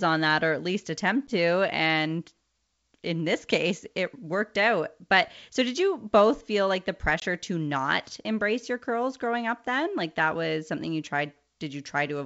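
Packet loss on the ADPCM call throws the decoder's predictor out of step. Hard-edged silent holes at 1.27 s, after "or at least attempt", and at 7.20 s, after "both feel like the", each end in brief distortion.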